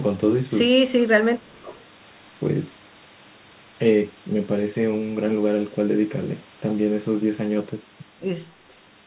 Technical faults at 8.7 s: echo leak

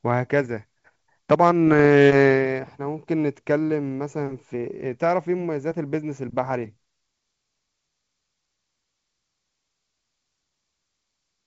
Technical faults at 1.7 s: bit errors on an ADPCM link

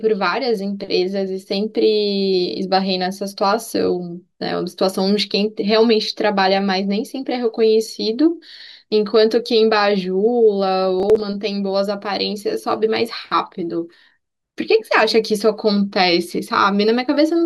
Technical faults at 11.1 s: processor overload crackle

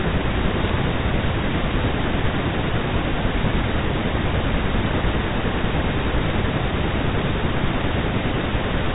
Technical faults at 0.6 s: bit errors on a digital phone line

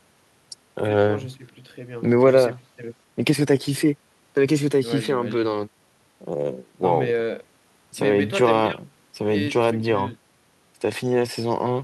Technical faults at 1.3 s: none

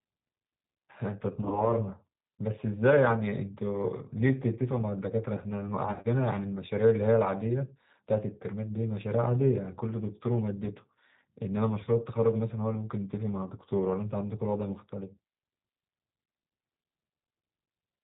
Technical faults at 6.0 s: G.729 codec; VoIP packet loss concealed by the speech codec

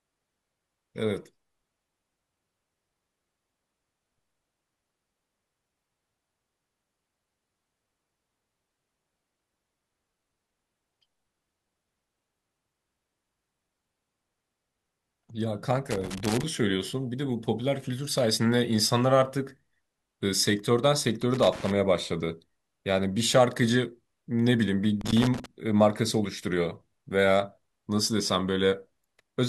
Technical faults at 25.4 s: loose connector crackle

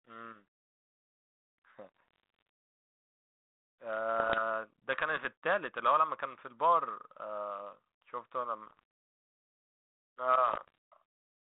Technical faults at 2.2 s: bit errors on an ADPCM link

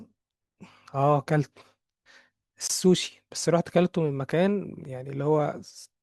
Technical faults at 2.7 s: gap between stream segments

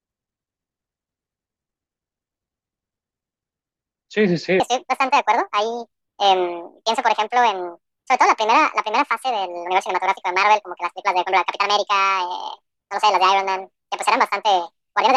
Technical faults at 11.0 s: section at the wrong speed

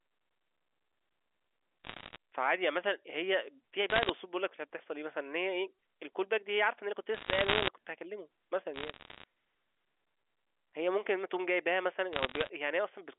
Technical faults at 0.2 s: none

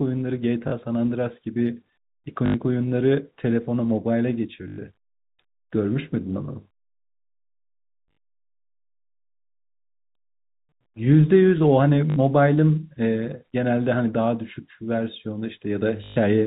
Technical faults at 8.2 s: packet loss with last packet repeated

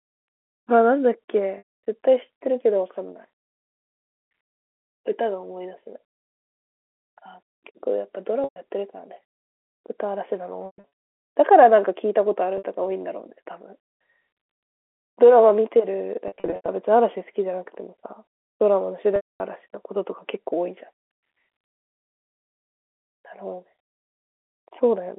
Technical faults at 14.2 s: none

